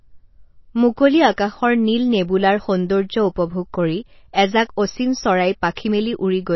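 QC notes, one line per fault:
Throughout: MP3 compression, likely. Nothing is heard above 5.8 kHz, so the speech sounds dull and muffled. The damage is plainly audible, with a watery, swirly texture as weak components drop in and out. This fits a starved bitrate near 24 kbps.
5.74 to 5.77 s: pre-echo. A short hiss comes about 34 ms before a sharp onset, and the attack sounds softened. The codec spread noise sized for the loud moment across its whole block, filling the quiet gap beforehand.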